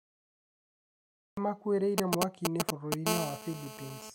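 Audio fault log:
0.00–1.37 s: cut-off start. The clip opens on flat digital silence, and at 1.37 s the speech snaps in already under way, with no rising attack or fade-in, as though a door had been opened onto a sentence in progress. Capture began late, so the first moments of the utterance were never recorded. The silence before it is the empty buffer, and the abrupt jump from nothing to full level marks the late start.
1.98–2.94 s: GSM signalling bursts. A galloping, stuttering pattern of dit-dit-dit ticks and brief rasping buzzes breaks through, louder than the speech by roughly 5 dB. The buzz pitch sits at 217 Hz. A 2G handset close to the equipment was sending short clusters of radio bursts while signalling, before any call was set up. The audio circuitry rectified those pulses into the audible ticking rhythm.
3.07–4.10 s: GSM phone buzz. A hard, continuous, raspy drone at 217 Hz, thick with harmonics, runs beneath the speech at about 6 dB below it and has no relation to what is being said. 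The same nearby 2G phone, now in a call, was transmitting bursts 217 times a second without pause. Rectified by the audio input, that steady pulse train becomes the unbroken buzz through to the end.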